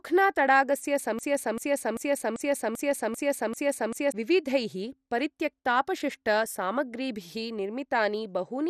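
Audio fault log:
throughout: MP2 compression. A low-rate MPEG Layer II encode, likely around 64 kbps, is not giving enough bits to cover all of its 32 sub-bands, so the top bands are dropped and nothing is left above about 14.3 kHz. The bands that survive are coarsely quantised and flicker in and out, which makes the speech sound dull, with a plainly audible gurgling, grainy roughness like weak digital radio.
1.19–4.12 s: broken-record loop. The playback or stream path has likely stalled and kept resending the last fragment it held, instead of moving on to new audio. A 0.39 s slice of speech repeats exactly, back to back, seven times, producing a stuttering, mechanical repetition for nearly three seconds. Whatever should have been heard during that span is missing, and the speech resumes after 4.12 s with that section lost.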